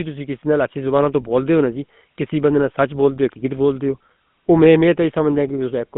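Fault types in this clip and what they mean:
GSM full-rate codec: The speech sounds as if it passed through an early mobile phone codec for the whole clip. This codec models the vocal tract and drives it with a sparse, regularly spaced pulse train instead of the real waveform. That leaves a plainly audible buzzy, gravelly roughness on the voice. The band runs only from about 150 Hz to 3.6 kHz, so the sound is thin and lacks air. The coarseness fits a 13 kbps full-rate stream.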